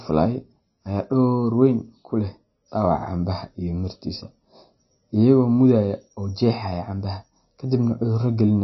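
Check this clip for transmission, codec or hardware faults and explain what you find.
One codec fault runs through the whole speech clip. Nothing is present above 5.8 kHz, and the audio has a watery, swirling quality with smeared consonant onsets. The cause is likely MP3 compression at a starved bitrate, which fits roughly 24 kbps: the encoder cuts the treble at a fixed point and drops weak frequency lines that flicker between frames.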